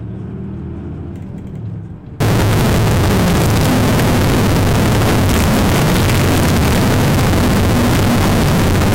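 A recording of everyday sound that, from 2.20 s to the end, turns into a harsh, very loud, nearly square waveform at an almost fixed, high level, with background noise as loud as the main sound. This is float read as integer, likely 32-bit float samples interpreted as 32-bit integers.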